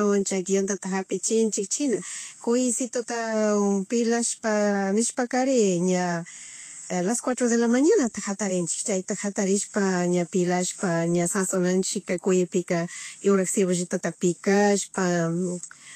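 Vorbis compression runs through the whole speech clip, with nothing above 14.1 kHz. The likely cause is low-bitrate Vorbis coding, which fits roughly 35 kbps, leaving treble detail coarsely quantised into matching noise, so sibilants turn hissy and grainy and consonant attacks blur.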